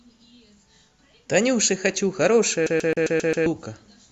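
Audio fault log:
2.66 to 3.46 s, CD stuck on one turn: for about 0.8 s the speech locks into a fast, even stutter, the same 133 ms slice playing six times in a row with a tiny mute at each jump back. That's the classic skipping-disc sound. A scratch keeps knocking the laser back one track at the same point of every revolution, so the player replays that short stretch until it finally gets past the damage.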